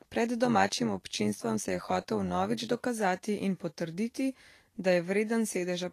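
Throughout, likely Vorbis compression at a low bitrate around 35 kbps discards treble above 14.2 kHz and turns fine detail into plainly audible hiss and grain. From 0.45 to 2.88 s, overlap-add ripple from frames rejoined without constant gain swings the level by about 11 dB about a hundred times a second, heard as a metallic buzz.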